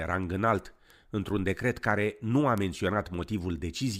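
From 0.23 to 3.91 s, around ten sharp, uneven ticks recur roughly every 0.3 s: word clock ticks, where an unlocked receiving clock drifts and slips one sample at each crossing.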